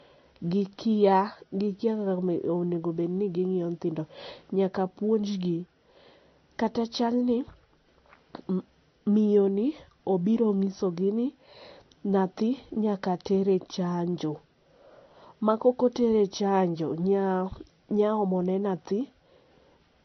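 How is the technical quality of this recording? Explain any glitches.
The recording is compromised by stacked compression damage that runs through the whole speech clip. Nothing comes through above about 6.1 kHz, so it sounds dull and band-limited from start to finish.

The likely cause is transcoding between lossy codecs: a low-rate MP3 pass, around 48 kbit/s, followed by a Vorbis re-encode near 31 kbit/s. The second encoder wasted bits reproducing the first one's artefacts while adding its own, and the 6.1 kHz ceiling persisted. A single low-bitrate encode would show one consistent artefact type. Here two different textures are audible at once.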